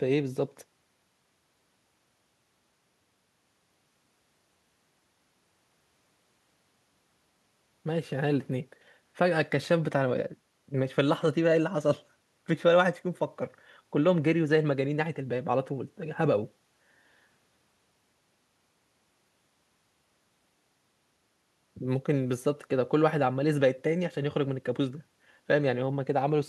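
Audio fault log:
No technical faults can be heard anywhere in the speech recording; the signal stays stable and intact throughout.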